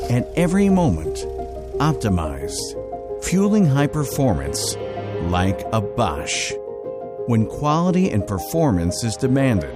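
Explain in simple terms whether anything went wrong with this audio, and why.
Nothing went wrong here: listening through, there's no glitch, dropout or odd noise to point to, so the recording is fine.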